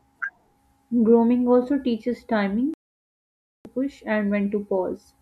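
Right after "also teaches", at 2.74 s, the speech drops to silence and only resumes at 3.66 s. This is a digital broadcast dropout: the receiver lost valid frames and muted, so roughly 0.91 s of programme is simply gone.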